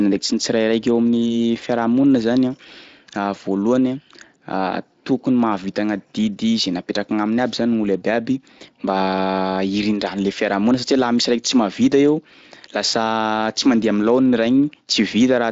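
No technical faults are present in this speech recording, which passes through a Speex codec path operating normally.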